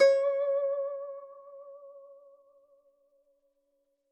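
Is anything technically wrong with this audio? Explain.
No, nothing in this music points to a technical fault in the signal.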